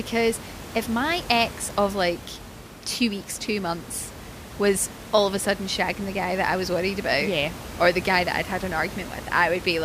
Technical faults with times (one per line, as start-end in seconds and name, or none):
none